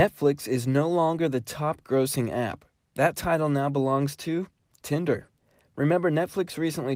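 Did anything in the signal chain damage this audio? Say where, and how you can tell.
No, nothing in the chain from capture to playback has left an audible mark on this speech.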